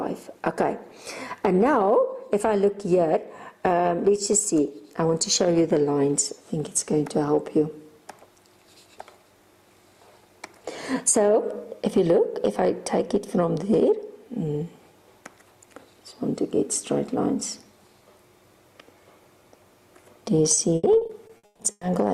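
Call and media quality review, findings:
Repeated packet loss (robotic sound), 20.55–21.83 s: choppy stretch, holes up to 140 ms patched by extending prior sound, about 40% concealed; recurring drops, unlike one isolated concealment.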